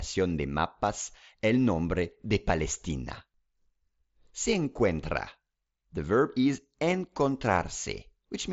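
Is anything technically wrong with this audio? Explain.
No, nothing's actually wrong here; it's speech carried over a Bluetooth mSBC headset link, so it tops out around 7.7 kHz, which is just how that wideband headset path works.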